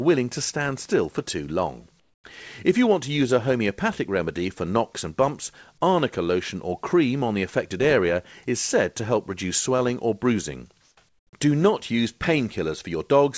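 Comfort noise in place of the background occurs at 2.00 to 2.24 s, 10.82 to 10.97 s and 11.09 to 11.33 s. The quiet background, about 45 dB below the loud parts, turns into steady, featureless hiss. It is about 10 dB, 3 dB and 14 dB quieter, louder and quieter respectively. The likely cause is discontinuous transmission, where a receiver fills pauses with synthetic noise. Nothing is heard above 8 kHz, which fits a G.722 call codec.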